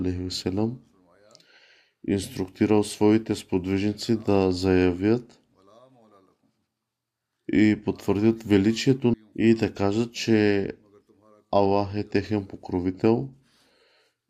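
This speech clip has an abrupt forward jump at 9.14 s, where the audio cuts from one moment to a later one with a brief blip at the join and no pause or fade. The likely cause is a stream segment skipped: one chunk of the segmented stream failed to arrive, so the player moved straight on to the next. Whatever that missing segment held never reaches the listener, which is why the continuity breaks so suddenly.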